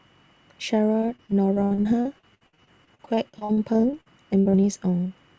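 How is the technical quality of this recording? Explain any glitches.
The speech has repeated packet loss (robotic sound) from about 1.0 to 4.65 s. About thirty short holes, the longest around 65 ms, get patched by stretching the previous sound, so roughly a quarter of that stretch is filler. It sounds choppy, with bits missing, over a call-codec band that stops at 8 kHz.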